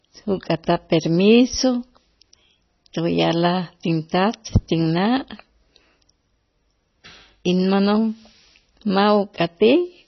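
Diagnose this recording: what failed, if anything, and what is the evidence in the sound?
Throughout, the speech sounds watery and swirly, with nothing above 6 kHz. The stage is the codec, likely heavy MP3 compression at a rate that fits about 24 kbps: the starved encoder cuts the treble at a fixed point and drops weak frequency lines that flicker between frames.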